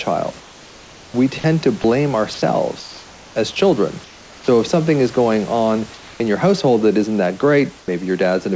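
From 0.40 to 3.36 s the speech is chopped by the voice detector. About 1.4 s of quiet edges drop out to synthetic fill, likely from the sender switching transmission repeatedly.

At 4.04 to 4.48 s, 5.94 to 6.20 s and 7.80 to 7.88 s, comfort noise replaces the background. The real room noise becomes flat hiss, about 4, 2 and 4 dB quieter. This is likely discontinuous transmission filling the pauses.

From 4.44 to 4.48 s the onset is clipped by the voice detector. About 40 ms of the start is missing, so the speech begins abruptly. The detector likely reacted late. Throughout, nothing sounds above 8 kHz, which fits a G.722 call path at 64 kbps.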